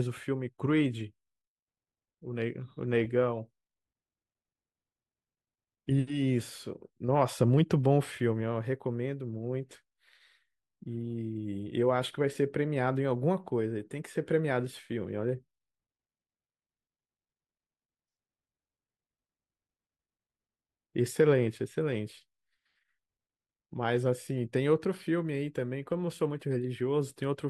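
No technical faults can be heard anywhere in the speech recording. Nothing in it calls for a timestamp or a closer look.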